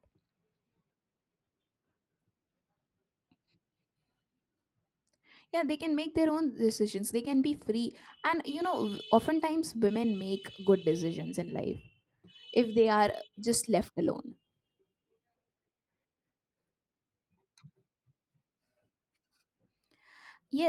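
No technical faults can be heard anywhere in the recording.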